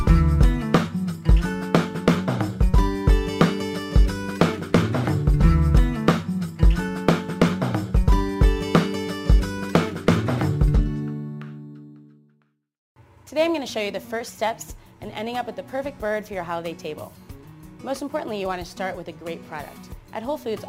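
From start to finish, a gritty, inharmonic fizz rides along with the sound, following its louder and brighter moments and sitting roughly 35 dB below it. This is crude rate conversion: the sample rate was raised without a proper filter, each new sample simply copying the nearest old one, which fits a step from 44.1 kHz to 48 kHz. That repeating pattern of duplicated samples creates shifted, unrelated copies of the audio, heard as this buzz.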